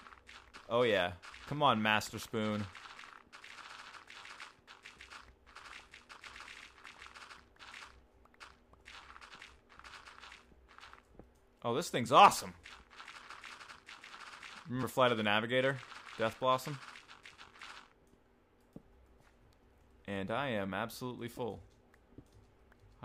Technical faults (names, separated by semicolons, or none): audio missing between chunks